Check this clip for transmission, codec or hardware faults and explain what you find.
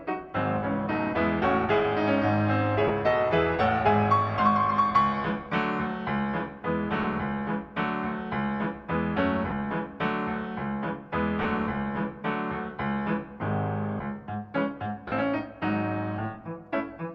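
One fault recurs: five short dropouts where Bluetooth LE Audio frames went missing and the decoder filled the gaps, heard alongside light lossy compression.

Lost LE Audio frames occur at 2.88 to 2.90 s, 7.03 s, 9.50 to 9.52 s, 11.43 to 11.45 s and 15.08 to 15.12 s. The gaps last 20, 10, 20, 20 and 40 ms, which fits runs of 10 ms LC3 frames. In each gap the LC3 decoder repeated the last good spectrum with randomised phase signs, so tonal content briefly turns into a grainy, noisy smear instead of a click or silence. On a spectrogram each gap shows a short vertical patch of diffuse energy. The longest one is at 15.08 s. In the waveform the signal turns noise-like for that span.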